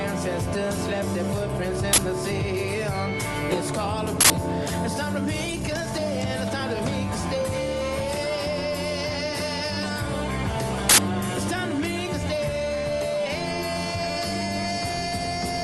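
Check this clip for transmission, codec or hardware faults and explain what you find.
Yes, there are faults: three bursts from an uninitialised buffer, one skip ahead, and two passages of jitter buffer speed-up. They sit on top of the call codec's normal coding, whose spectrum stops near 12 kHz.

Uninitialised buffer, at 1.93–1.98 s, 4.21–4.30 s and 10.89–10.98 s. Each time, a block was sent to the output before any audio had been written into it, so whatever stale memory it held was played as samples. The first burst lasts about 46 ms, which fits a 2048-sample block. The other two last about 93 ms, which fits 4096 samples. Each is heard as a sudden, loud crackle of digital noise. On the waveform it is a rectangular block of loud garbage with hard edges. On the spectrogram it is a bright vertical band across all frequencies.

Skip ahead, at 3.52–3.54 s. Roughly a second of audio was thrown away while later material was already queued, and playback jumped straight to it with no gap filled in. 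The audio on either side is spliced almost directly, so the sound lurches forward abruptly. On the waveform there is a discontinuity at 3.52 s with no silence. On the spectrogram, the patterns before and after the seam don't line up.

Jitter buffer speed-up, at 5.47–6.60 s and 11.79–12.91 s. Too much audio had piled up in the receive buffer. To shrink the delay, the receiver repeatedly cut out short pieces, each one or a few pitch periods long. The first passage runs at 128% speed and removes about 0.3 s, so it sounds noticeably rushed. The second runs at 107% and removes about 0.1 s, so it is only slightly hurried. Pitch stays the same in both. On the spectrogram, events are compressed in time while the harmonic spacing is unchanged.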